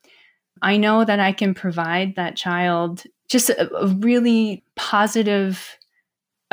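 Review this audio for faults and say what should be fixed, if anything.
Crude rate conversion runs through the whole speech clip: a gritty, inharmonic fizz rides on louder and brighter syllables, roughly 25 dB below the signal. The pattern suggests linear interpolation from 32 kHz to 44.1 kHz, whose uneven ratio scatters aliased tones unrelated to the voice. To prevent it, convert with a proper band-limited resampler that low-pass filters before changing rate.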